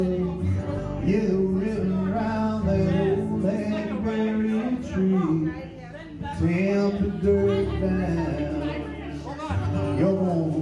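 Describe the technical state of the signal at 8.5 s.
At 8.5 s the audio is intact, with no dropout, click, distortion or other technical fault to be heard at that point.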